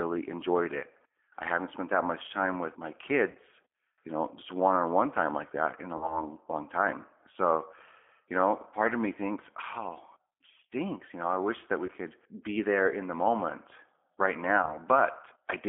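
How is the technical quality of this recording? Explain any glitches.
Quality is rough: it's a narrowband phone-call sound with a few short dropouts.

The whole thing runs through what sounds like the G.729 codec, consistent with 8 kbit/s. The line only carries about 250 Hz to 3.5 kHz, so it's thin and muffled. The pulse-based rebuild of the speech leaves a plainly audible grainy, slightly synthetic edge.

Then there's VoIP packet loss concealed by the speech codec, at 3.31–3.38 s after "much time with my", 5.97–6.20 s, 11.86–11.90 s between "know I wish that" and "could be there in", and 14.62–14.77 s after "in the moment right". The decoder stretches its last pitch and filter over the missing audio, roughly 40 ms at the first two and 20 ms at the last two, so you hear a brief buzzy or noisy, fading smear. The voice then takes a moment to recover.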